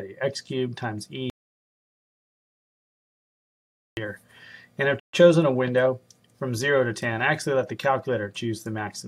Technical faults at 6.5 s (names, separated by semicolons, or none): none